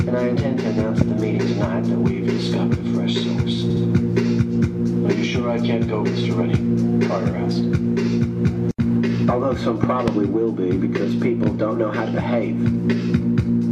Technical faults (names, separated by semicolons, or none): loud pop; repeated frames